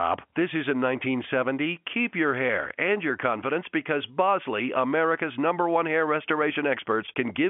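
Speech carried over G.711 telephone coding, band-limited to roughly 150 Hz–3.4 kHz with nothing above about 3.7 kHz, and no faults to report.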